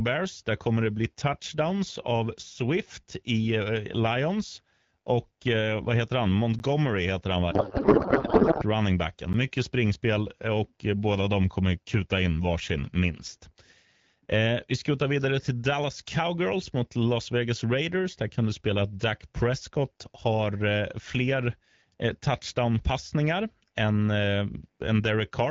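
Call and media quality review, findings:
Block of digital silence at 6.59 s and 9.33 s: 10 ms dropouts, likely output buffer underrun; flat zero line on waveform.

Codec payload misread, 7.51–8.65 s: AMR-WB speech turns to garbled noise and warble barely tracking speech, consistent with octet-aligned frames decoded as bandwidth-efficient. Spectrogram shows smeared, unstructured energy; envelope no longer follows the speech.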